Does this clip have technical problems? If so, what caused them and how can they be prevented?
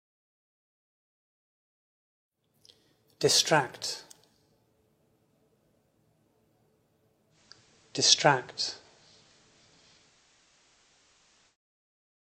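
Yes. From 7.30 to 11.57 s the receiver lost its digital signal and cross-faded to the station's FM broadcast over 106 ms. This is digital radio blending to analogue. The level shifts by about 1 dB, and hiss appears roughly 30 dB below the programme. A better aerial or aerial position keeps the digital signal locked and prevents the fallback.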